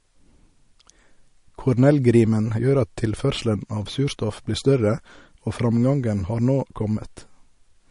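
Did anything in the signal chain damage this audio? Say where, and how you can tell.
Yes. The damage sits at the codec stage and runs through the whole speech clip: the sound is watery and swirly, s sounds carry a metallic chirp, and consonant attacks smear. There is nothing above 10.5 kHz, a hard treble ceiling. The likely cause is MP3 compression at a low bitrate, which fits roughly 40 kbps. Short of bits, the encoder cut the top band outright and zeroed weak frequency lines that flicker on and off between frames.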